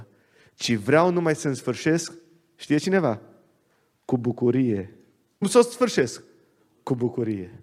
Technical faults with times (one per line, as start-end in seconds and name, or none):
5.41 stream segment skipped